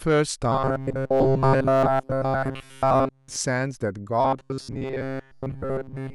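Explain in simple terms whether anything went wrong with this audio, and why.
Two stretches of this speech have a robotic sound from repeated short buffers, from 0.52 to 3.37 s and from 4.21 s to the end at 6.14 s. The voice becomes a stiff, metallic buzz fixed at about 134 Hz, entirely in the first stretch and for most of the second. This likely happens because new audio arrives too slowly, so the software keeps replaying a tiny slice of roughly 7.5 ms, and that rapid repetition sets the buzzing pitch.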